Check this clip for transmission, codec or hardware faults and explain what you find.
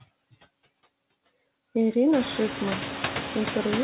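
One fault runs through the whole clip: noise suppressor artifacts.

Noise suppressor artifacts, throughout: the suppressor treats the steady background as noise and pulls those bands down by about 17 dB frame by frame. The room noise sinks in the gaps and returns under the speech. This is most exposed after the room noise rises by about 21 dB at roughly 2 s, ending only about 9 dB below the speech.

The room noise itself belongs to the recording. The absence of anything above 4 kHz fits a G.711 mu-law call path at 64 kbps, which is expected behaviour and not a fault.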